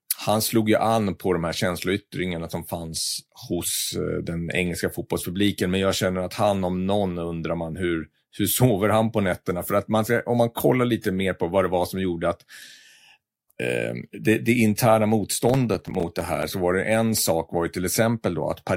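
From 15.49 to 16.43 s, just after "det det interna" and before "så var det en", the speech breaks into a gritty burst of processor overload crackle. The system missed its deadlines repeatedly, and each missed buffer dropped out to silence with hard edges. The spacing fits short buffers of around 5 ms, with something like twenty lost. A waveform shows the speech riddled with near-silent gaps, and a spectrogram shows thin vertical broadband streaks at each cut.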